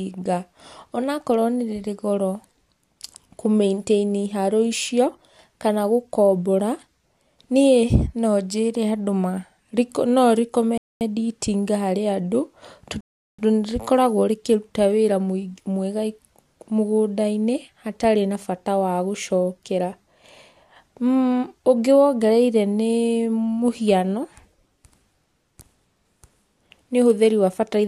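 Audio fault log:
10.78–11.01 s and 13.01–13.39 s, rebuffering stall: the speech drops into silence and then picks up exactly where it broke off, adding about 0.23 s and then 0.38 s. The player ran out of downloaded audio and waited for more data, so no material is lost.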